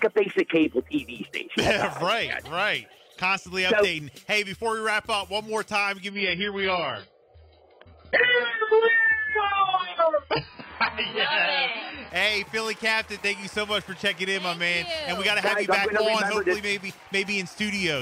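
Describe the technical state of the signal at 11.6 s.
At 11.6 s the audio is inside a stretch where the adaptive stream has dropped to a lower bitrate, running from 6.10 to 12.10 s. Nothing is heard above about 5.1 kHz, and the remaining band carries coarse, smeared codec artefacts. That fits a player falling back from roughly 96 kbit/s AAC to a version near 12 kbit/s. Unlike a dropout or buffering stall, the switch comes with no gap, and full quality returns abruptly at 12.10 s.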